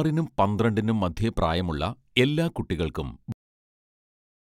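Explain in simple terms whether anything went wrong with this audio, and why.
Yes, something went wrong: the clip has a cut-off end. At 3.32 s the speech stops abruptly in the middle of a sound, and everything after that, up to the end of the file, is digital silence. There is no natural fade or trailing off. The final stretch of audio was never written to the file or played out, so the recording simply ends where the data runs out, not where the speaker stopped.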